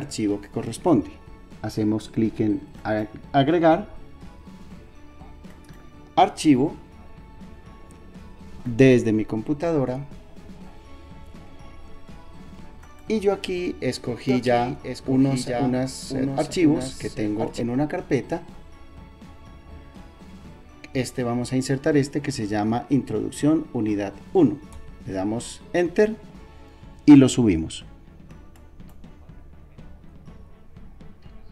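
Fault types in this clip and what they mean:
doubled audio track: A slower second path likely mixes the sound in twice, so from 14.3 to 17.6 s a copy about 5 dB quieter trails about a second behind.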